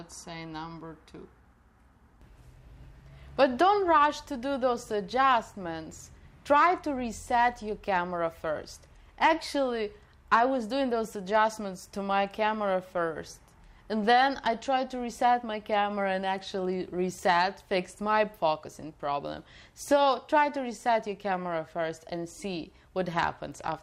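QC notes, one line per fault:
No faults heard anywhere in this clip.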